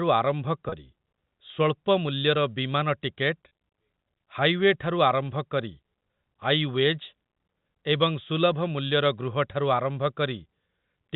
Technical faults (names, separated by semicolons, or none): packet loss with pitch repetition